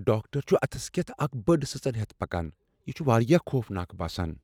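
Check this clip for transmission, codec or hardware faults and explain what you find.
No faults found in this speech; nothing to report.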